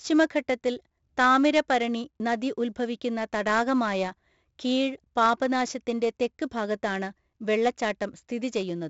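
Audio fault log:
throughout, 4-bit ADPCM compression: each sample is coded as a coarse 4-bit step from a running prediction. The quantisation error rides on the speech as a gritty hiss that rises and falls with its level, and it is heavy here, roughening louder syllables and smearing sharp onsets where the step size lags behind. Nothing is heard above about 7.7 kHz, so the sound is dulled, which fits a 16 kHz sample rate and a stream of about 64 kbps.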